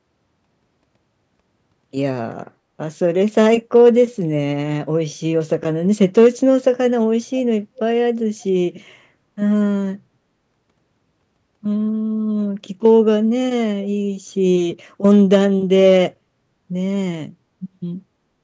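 Speech with brief hard clipping at 3.37–3.89 s, 6.01–6.27 s, 12.85–12.94 s, 15.05–15.37 s and 15.85–15.98 s, where peaks overshoot a stage's ceiling by about 1 to 4 dB and are cut flat. The result is crackle only on loud moments rather than the constant warm thickening of soft saturation.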